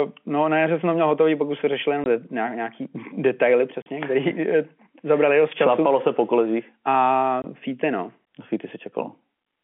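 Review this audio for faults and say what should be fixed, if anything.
Packet loss filled with silence at 2.04–2.06 s after "už se řešili jenom", 3.82–3.86 s, and 7.42–7.44 s before "fíty no no". Lost packets were replaced by hard-edged gaps of 20 or 40 ms, which fits 20 ms packets. Enabling packet loss concealment and a jitter buffer at the receiver would fill such gaps smoothly instead of with silence.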